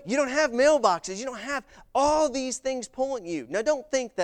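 No technical faults are audible.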